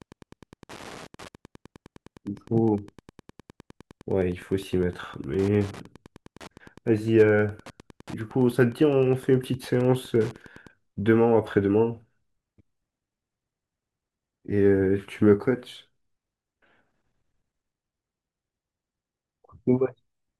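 From the start to about 10.73 s there's Wi-Fi interference: a nearby radio's beacon, every 102.4 ms, gets rectified into a steady tick about ten times a second, roughly 25 dB under the speech.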